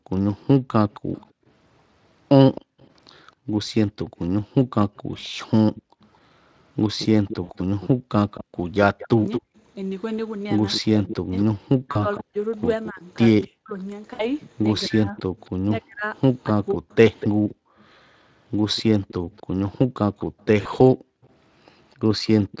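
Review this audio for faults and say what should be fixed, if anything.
Background gated by the echo canceller shows up three times: between 0.0 and 8.09 s (around a second and a half of dips in total), at 17.55 to 17.78 s, and at 20.26 to 21.23 s. Each time the room tone sinks by up to about 40 dB and then comes back, because the canceller slams the mic gain down whenever the far end is playing out of the loudspeaker. Swapping that hard gate for comfort noise or gentler suppression would keep the background steady.

The echo leak runs from 0.92 s right to the end. There's a faint copy of the speech trailing about 247 ms behind, sitting roughly 15 dB under the main signal. That points to a speakerphone on one side whose canceller isn't fully removing what its mic hears, so the leftover gets sent back down the line. Better canceller tuning, or simply a headset on that end, should get rid of it.

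Speech suppressed in double talk happens between 9.16 and 16.83 s. When both sides talk at once, the speech here drops away in pieces, sometimes by something like 40 dB, for around two seconds altogether. The likely cause is the canceller mistaking this talker for its own loudspeaker echo and turning everything down. A canceller with proper double-talk detection would let both sides through together.

VoIP packet loss concealed by the speech codec hits at 7.43–7.52 s (60 ms), 11.91–12.04 s (40 ms), 14.13–14.26 s (60 ms) and 20.61–20.67 s (40 ms). Those lengths fit two or three lost 20 ms frames. In each gap the Speex decoder fills in by stretching the last sound into a fading buzzy tone or coloured noise, and the speech sounds weak for a moment after the packets come back. A bigger jitter buffer or some forward error correction on the network path would help here.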